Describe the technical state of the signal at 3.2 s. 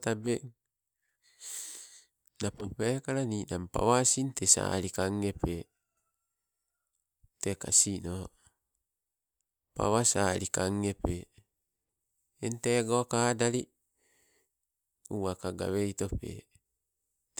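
At 3.2 s the signal is intact, with no fault affecting it.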